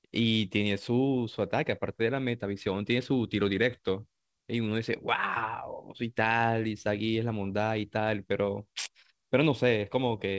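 No technical faults are audible.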